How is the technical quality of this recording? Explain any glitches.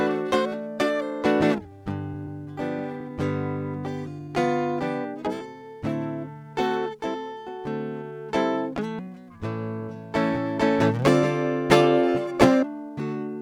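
The music is marred by small, recurring timing hiccups from start to finish, caused by a clock mismatch between the two ends of the link.

Clock drift between sender and receiver runs through the whole recording. The sending side's clock runs roughly four percent fast, so the receiver's jitter buffer keeps overfilling. Unlike packet loss, which leaves silent gaps or smeared patches, this produces no dropouts, only a steady sense that the timing isn't quite settled.

Repeated timing corrections are audible from 0.09 s to 13.29 s, with playback running at about 104% speed. To shed the surplus, the receiver repeatedly trims short slices out of the stream, always removing and never repeating. The cuts are unevenly spaced, heard as faint skips and an unsteady, slightly rushed tempo rather than a smooth pitch-and-speed shift.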